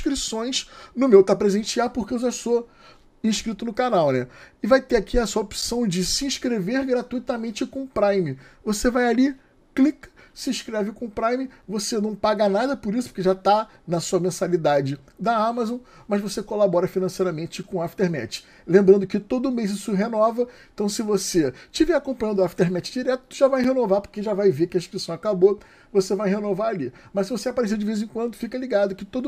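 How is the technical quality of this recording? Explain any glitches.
The recording has a recurring gap between chunks. Four short dropouts of about 7 ms fall at 5.62, 11.62, 17.63 and 23.64 s, spaced every 6 s. The audio seems to have been carried in 6-second blocks, with a sliver of silence added at each join, likely from codec padding or late playback of each block. Nothing is lost, but each join is heard as a tiny hole or dip in the sound. On a waveform, each shows as a flat, near-silent stretch with abrupt edges. On a spectrogram, each is a thin vertical blank stripe.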